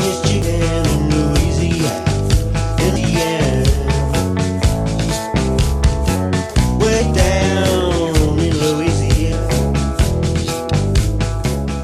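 At 0.42 s, 2.95 s, 6.99 s and 9.31 s there are short bursts of damaged data in a compressed stream, each lasting under 20 ms. At each point some bytes of the encoded stream are wrong, so the decoder misreads or rejects the affected frame, loses sync and has to hunt for the next valid frame header before playback recovers. Each event is heard as a brief chirp, squawk, click or short hole cutting through the sound.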